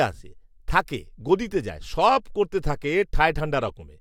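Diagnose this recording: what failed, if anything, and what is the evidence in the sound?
The codec stage failed: a corrupt frame was decoded at 3.67 to 3.70 s, a brief chirp-like blip peaking around -25 dBFS and lasting about one frame. Damaged bits sent energy to wrong frequencies. Unlike concealed packet loss, the damaged frame is played as decoded rather than replaced, so its energy lands at misplaced frequencies.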